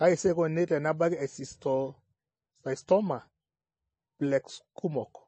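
Throughout, the speech carries plainly audible MP3 compression artefacts: watery, swirly sibilants and nothing above 8.4 kHz, likely from a low bitrate near 28 kbps. A spectrogram shows a flat ceiling and flickering high bins.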